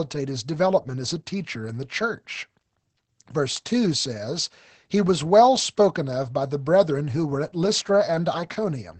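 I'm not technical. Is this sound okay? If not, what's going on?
No, not quite. From start to finish the speech carries Opus voice compression, squeezed hard enough to notice. Everything above about 8.6 kHz is cut away, so it sounds muffled, and the voice gets a slightly hoarse, robotic edge from being rebuilt coarsely.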